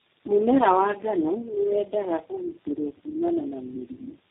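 From start to finish, the speech carries tandem speech coding. It passed through about four low-rate speech codecs in a row, with plain telephone links between them. Each border meant a full decode and re-encode, so every coder worked on the last one's damage. The errors stack up. The voice sounds rough, muffled and warbly, worse than any single codec. Nothing remains above about 3.8 kHz, which fits a narrowband chain ending in G.729A.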